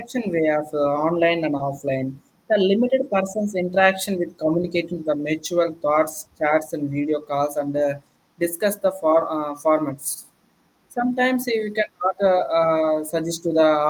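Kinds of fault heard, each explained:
Short stall from a late packet, 1.57 to 1.62 s: a packet of this speech failed to arrive on schedule, so the receiver's jitter buffer emptied and the decoder kept extending the last bit of sound for about 20 ms until the data caught up. Playback then resumed exactly where it left off, so nothing is lost, but that moment is briefly drawn out with a faint buzz or dip, and everything after it runs 20 ms later.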